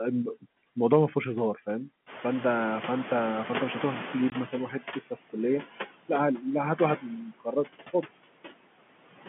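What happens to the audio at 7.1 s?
Speech cut by the noise suppressor runs from 6.97 to 7.69 s, with something like 400 ms of speech affected in that span. The suppressor mistakes part of the speech for background noise and turns it down, by about 21 dB at the deepest point, so those sounds come out faint or swallowed.

Noise suppressor artifacts are also present at this moment, as they are throughout. The suppressor lowers the bands it treats as steady noise by about 18 dB, frame by frame, so the remaining noise pumps against the speech and the residue can warble.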